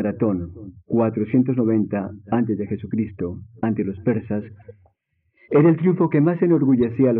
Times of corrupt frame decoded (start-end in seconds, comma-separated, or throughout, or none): 2.34, 4.60-4.71